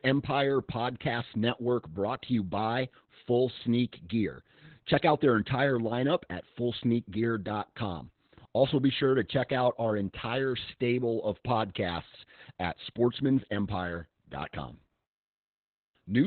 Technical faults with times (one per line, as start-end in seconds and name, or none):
0.00-16.27 Opus voice compression
12.86 dropped samples